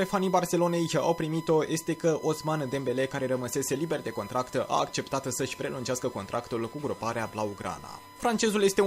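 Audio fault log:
throughout, USB whine: a steady, fixed-pitch tone at 1 kHz sits under the whole clip, sitting roughly 20 dB below the wanted sound, with its energy concentrated at that fundamental. The pitch matches the 1 ms frame rate of a USB bus. Each frame pulls a burst of current, and that periodic draw leaks into the audio path through shared power or ground, so the bus timing itself becomes audible as a constant whine.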